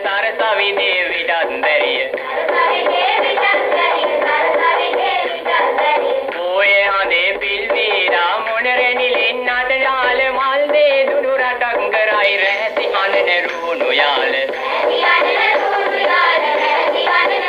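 From 0.0 to 12.24 s, the sound shows channel delay with comb filtering. One channel runs a few samples late, roughly 0.07 ms, before the mono sum. Shared content cancels near 7 kHz, so the top end sounds hollow and phasey.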